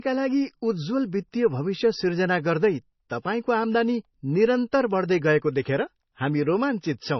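Speech runs dull and band-limited from start to finish, with nothing above 5.9 kHz. This is low-bitrate audio saved at a high bitrate: the cut-off fits a very low-bitrate MP3 that was likely re-encoded at a much higher bitrate, which cannot restore the missing top end.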